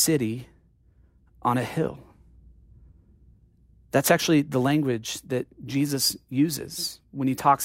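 A speech clip with a single sharp, broadband tick at 5.31 s, right after "actually the language": a bit error spike, one flipped bit jolting a single sample to about -26 dBFS.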